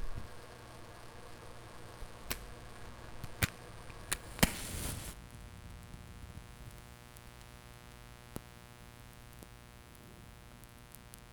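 Mains buzz runs throughout: switching spikes twice per 60 Hz cycle leak in, stacking harmonics into kilohertz, giving a steady raspy buzz roughly 10 dB under the sound.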